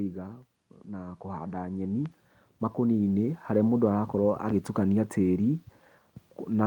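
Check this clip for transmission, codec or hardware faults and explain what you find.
Automatic gain rising shows up twice in this speech clip. From 0.93 to 2.21 s the level climbs by about 6 dB, then again from 2.75 to 3.48 s by about 3 dB. In both stretches the gain control has judged the input too quiet and is turning itself up step by step, so you hear the talker and the room noise swell together rather than the voice simply getting louder.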